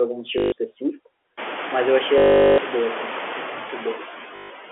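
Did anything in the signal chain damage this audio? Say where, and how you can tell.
Yes. Call processing has a noise suppressor at work throughout, and its artifacts are audible. The background is pulled down by about 9 dB in the gaps and comes back up under the speech, so the noise floor pumps frame by frame. This is clearest after about 1.5 s, where the room noise rises by about 22 dB.

The network stage shows packet loss with the last packet repeated, in three places: 0.38 to 0.52 s, 2.18 to 2.58 s and 4.36 to 4.50 s. The receiver fills each gap by replaying the final good packet. The repeats seldom line up with the voice's pitch, so the fill becomes a robotic buzz. A 50 Hz buzz fits 20 ms packets. The 400 ms gap near 2.2 s produces the longest stutter.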